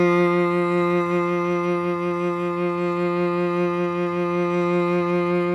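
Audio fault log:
No technical faults can be heard anywhere in this music clip; the signal holds steady from its opening to its close.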